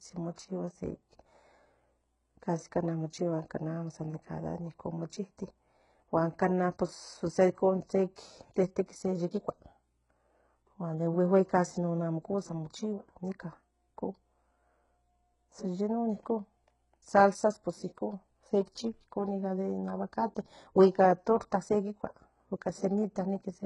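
A speech recording with heavy codec damage throughout. Nothing remains above 11.1 kHz, and the treble sounds gritty and metallic, with lispy s sounds. This is likely HE-AAC compression, which fits a very low bitrate near 12 kbps. There is also pre-echo at 0.36 s. A brief hiss of about 19 ms smears the onset, because coding noise leaks ahead of the sharp attack.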